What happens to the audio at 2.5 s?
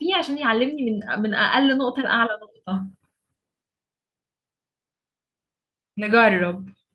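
Nothing goes wrong at 2.5 s: the speech is intact there, carried through the WebRTC call path with only the ordinary Opus coding and the top of the band rolled off around 12 kHz.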